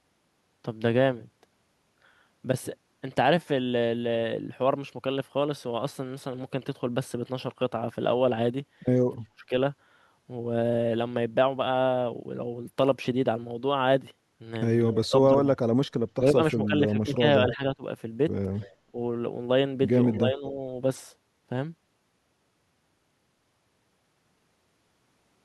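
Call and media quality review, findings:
Speech suppressed in double talk at 9.16–9.52, 15.03–15.76, 16.2–17.83, 18.87–18.97 and 20.19–20.61 s: speech dips, deepest about 35 dB at 9.16–9.52 s. Likely echo canceller attenuating both sides during overlap.

Echo leak at 14.79–14.95 and 18.61–18.69 s: faint copy of speech, roughly 25 dB down, delayed 253 and 243 ms. Likely residual loudspeaker echo passing the loudspeaker side's canceller.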